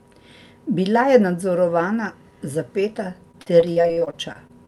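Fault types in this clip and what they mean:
Repeated packet loss (robotic sound): From 3.31 s to the end at 4.67 s the speech keeps breaking up as thirteen short holes, none longer than 50 ms, are patched by stretching the preceding sound, so about a quarter of that stretch is synthetic fill and the voice turns choppy. On a spectrogram the harmonics smear into flat, repeated horizontal bands at each patch. The waveform shows copied, periodic segments with abrupt joins.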